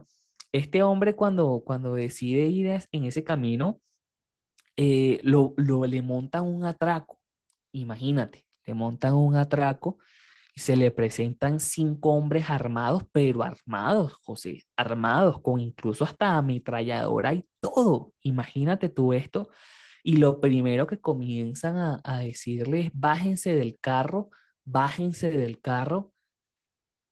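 Throughout the speech, Opus voice compression is running in hybrid mode: a linear-prediction coder handles the band up to 8 kHz and a transform layer codes the top of a fullband signal. The damage is plainly audible and points to a rate near 16 kbps in 20 ms frames. The excitation is quantised coarsely, so the speech comes across hoarse and slightly robotic.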